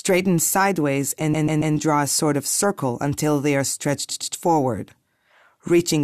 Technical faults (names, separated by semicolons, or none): repeated frames